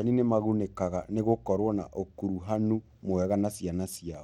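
Bluetooth SBC compression colours the speech from start to finish, with plainly audible damage. The treble thins and flickers in and out, and a gritty, granular noise with aliasing rides on the sound. This is likely the work of SBC encoding at a small bit pool, which fits a bitrate of about 96 kbps: the codec splits the signal into a few broad sub-bands, starves the weak upper ones of bits, and quantises the rest coarsely.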